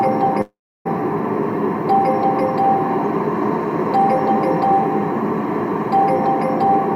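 At 0.41 s the audio breaks off and does not resume until 0.87 s, a gap of about 0.44 s. The last sound before the break is smeared forward as a buzzy, fading tail, and most of the gap, about 0.31 s, is silence. When the audio returns, the missing portion is simply absent. This is likely a long network dropout, with the receiver's concealment stretching the final received sound before giving way to silence.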